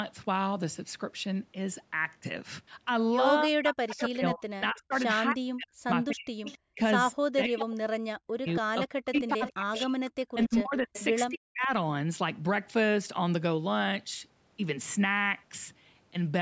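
From 3.44 s to 11.69 s the speech repeatedly sinks, thins out or breaks into fragments. Around five seconds in all are affected, with the deepest dips about 40 dB below the surrounding level. This is speech suppressed in double talk. The likely cause is that both ends spoke at once and the echo canceller, unable to tell its own talker from the returning loudspeaker sound, pulled down everything it heard during the overlap.

Within that same stretch a faint, delayed copy of the sound trails the talker by 270 ms. It appears as short scraps at 3.99–4.06 s, 6.45–6.58 s and 8.47–8.54 s, then as a longer run from 9.18 s to 11.04 s, sitting roughly 15 to 25 dB under the speech and band-limited like the rest of the signal, which stops at 8 kHz. This is echo leak, likely from a far end on loudspeaker whose canceller let part of the microphone pickup through.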